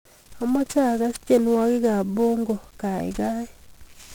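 From start to finish, the speech has been squeezed through 1-bit DFPWM compression, where each sample carries a single bit that only nudges an adaptive level up or down rather than recording its true value. The damage here is heavy, with a coarseness consistent with a rate around 48 kbps. The resulting quantisation error spreads across the whole band, so the speech sounds fuzzy and crackly throughout, with its upper frequencies smothered under a constant hiss.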